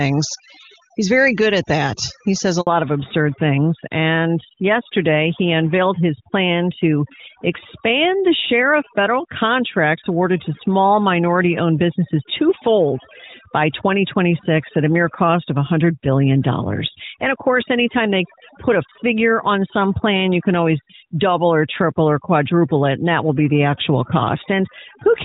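Overdone noise removal runs through the whole recording. The suppressor was pushed so hard that individual frequency bands near its noise estimate are cut to nothing. Low-level parts of the speech are stripped out along with the noise. The background sinks to near silence dotted with twinkling, chirpy specks. On a spectrogram this shows as a dark floor sprinkled with isolated bright dots, and speech harmonics that break up into ragged islands instead of smooth bands.

At 2.61 s a handover gap cuts in. The call was passed from one network to another, and no speech frames got through during the switch. The sound fades within a few tens of milliseconds and stays silent for about 60 ms until the new link picks up at 2.67 s, so whatever was said in that span is simply gone. The waveform shows a brief flat line, and the spectrogram a narrow, fully blank vertical stripe.

From 2.67 s to the end, the call falls back to narrowband. 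Before the handover it was carried as HD Voice with clear wideband detail, with the sound quality pointing to a high AMR-WB rate near 23.85 kbit/s. After the switch it sounds like the older AMR-NB codec at around 12.2 kbit/s, and nothing above 4 kHz survives. The speech turns duller, boxier and rougher, with sibilants losing their crispness. On a spectrogram, energy that reached up toward 7 kHz stops abruptly at a hard ceiling of 4 kHz right after the gap.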